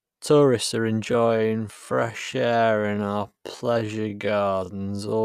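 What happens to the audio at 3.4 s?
At 3.4 s the speech sits inside a time-stretched section running from 1.05 s to the end, slowed to about 0.52 times its pace, likely by software repeating short pieces to lengthen it. It drags, yet the pitch holds steady, unlike a simple playback slowdown.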